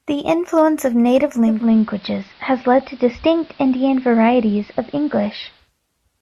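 Right at the start there's some light hard clipping, from 0.58 to 0.62 s and again at 1.16 s. The speech peaks ran only about 1 dB past what the stage could pass, so just the very tops got sliced flat. That's mild enough that you hear a quick crackly edge on those loud moments rather than any sustained fuzz. The flattened peaks throw off harmonics well up the spectrum, which is where that brittle tick comes from.

Then at 1.43 s the digital radio blends to analogue, here an AM feed, fading across over about 290 ms. A bed of hiss creeps in, sitting somewhere around 30 dB under the speech. The level doesn't shift. At 5.71 s it crossfades back to digital.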